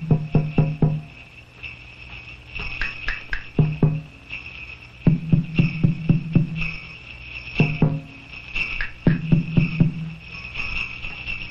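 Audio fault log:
throughout, MP3 compression: the whole clip has a plainly audible watery, swirling texture, with metallic chirps on bright, noisy sounds and softened attacks. This is likely lossy MP3 coding at a low rate, which fits about 64 kbps. The encoder drops weak frequency components that flicker in and out between frames.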